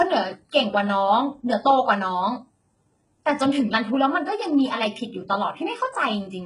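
From start to end the speech has heavy HE-AAC compression damage, likely from a very low bitrate near 12 kbps. Nothing sits above 11 kHz, yet the treble stays bright rather than dull, unlike a plain low-pass. That upper band is rebuilt, so s sounds turn gritty and metallic.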